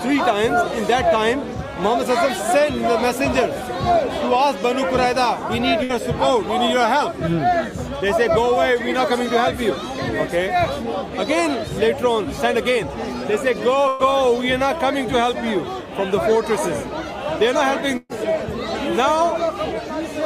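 A burst of packet loss struck the stream three times, with a run of consecutive packets lost or arriving too late. Each time the receiver stretched the last sound and faded it down before playback jumped ahead. At 5.83 s about 60 ms is gone, bridged for 58 ms. At 13.88 s and 17.97 s about 120 ms drops out, covered by 112 ms and 125 ms of decaying fill, the last ending with roughly 10 ms of silence.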